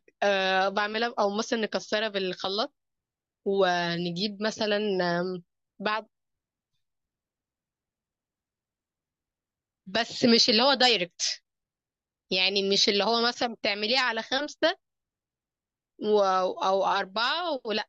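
No audible technical faults present.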